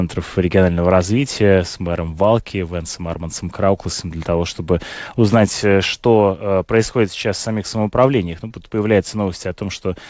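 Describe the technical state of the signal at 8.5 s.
At 8.48–8.52 s, just after "сейчас в самих самоуправлениях", short concealed packet loss: about 20 ms never arrived and the receiver extended the preceding sound, so it's a brief smear rather than a silent dropout or sharp click.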